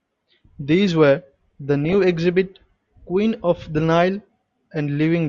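From 1.85 to 2.16 s, weak reception lets bit errors, at a rate somewhere under half a percent, slip past error correction into the MP2 data, producing DAB burbling. Corrupted samples put short blips of noise in single sub-bands and corrupted scale factors make individual sub-bands leap in level for up to a frame, which fits around 17 damaged frames, so the speech is overlaid with noise blips.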